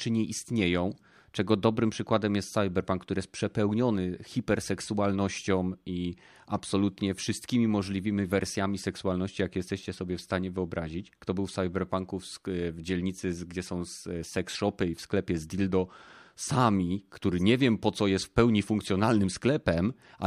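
At 7.33 s, between "przepełniony hiperseksualnością i absolutnie" and "możliwymi wersjami seksualności jakie", a single sharp click sounds, likely dropped samples, with about one sample missing so the waveform jumps.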